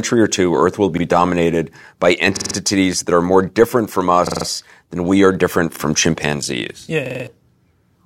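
Repeated buffers stutter through the speech at 0.98, 2.37, 4.27, 5.76 and 7.06 s. Audio arrived late, so the last 46 ms block replayed, which fits a 2048-sample buffer. After "will be" and "than we are different" it repeats once. The others repeat four times, giving hard-edged stutters.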